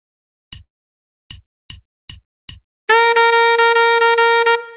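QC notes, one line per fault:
0.64–0.94 s, long network dropout: about 0.28 s of audio is gone, likely lost packets. The last sound stretches into a fading buzz, then near silence. The waveform shows a decaying tail and a flat gap, with a smeared band below the G.711 path's 4 kHz limit on a spectrogram.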